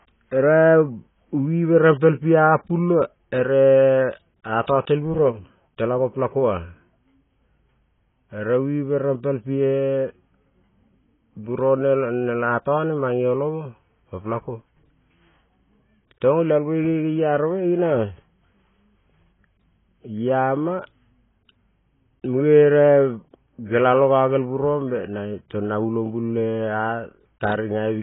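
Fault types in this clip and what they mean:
AAC compression: The speech has nothing above 3.8 kHz and sounds dull, smeared and warbly, likely from heavy AAC-LC coding at a very low bitrate around 16 kbps. A spectrogram shows a flat ceiling at 3.8 kHz.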